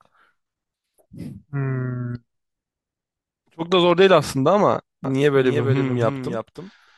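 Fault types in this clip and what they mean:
Doubled audio track: From about 5.04 s to the end, the speech is joined by a second full-band copy trailing roughly 300 ms behind and about 5 dB quieter, likely from a slower capture path or a misaligned edit. The copy cuts in abruptly, with no decay or room colour. On a spectrogram, every syllable's pattern repeats as a fainter shifted duplicate; on the waveform, envelopes overlap with a matching lagged shape.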